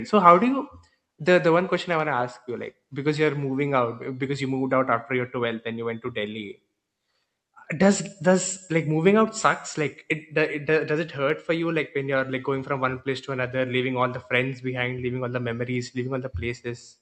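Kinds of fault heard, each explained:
No faults can be heard anywhere in this speech.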